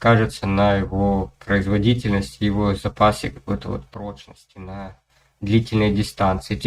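At 3.94 s the level drops abruptly by about 12 dB, and the background noise falls by the same amount at the same instant, so the whole signal sounds quieter. It stays at that reduced level until 5.1 s, when it snaps back up just as suddenly. This sudden gain jump is likely a digital gain setting applied from one sample to the next with no ramp, first down and then back up.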